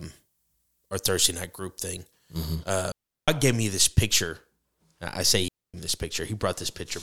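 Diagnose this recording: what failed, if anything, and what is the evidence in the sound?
Pre-emphasis left on from 0.0 to 2.55 s: a playback-stage fault where the CD 50/15 µs treble boost was never de-emphasised, leaving 10 kHz about 8 dB hot, thin and sibilant.

Digital wireless dropout at 2.92 to 3.28 s, before "gave me this picture", and 5.48 to 5.74 s, between "this picture I say" and "me this": the wireless link lost data, so the receiver muted cleanly for 0.36 s and 0.26 s without noise bursts.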